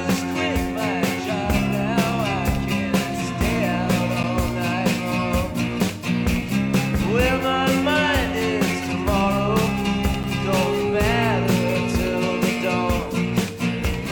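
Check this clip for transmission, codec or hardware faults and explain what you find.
Two brief dropouts mark a gap between stream segments, at 4.23 s and 10.23 s. The segment timestamps leave a hole of about 9 ms each, which the player fills with silence. The sound cuts out with hard edges, exactly 6 s apart, matching 6-second segments.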